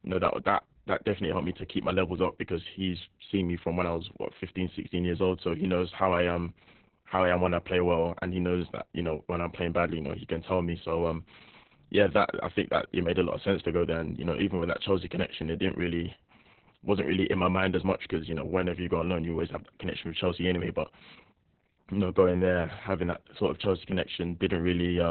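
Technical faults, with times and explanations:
Throughout: Opus voice compression. Speech sounds muffled, hoarse and robotic, with nothing above 4.2 kHz, which fits a very low-bitrate narrowband SILK coding.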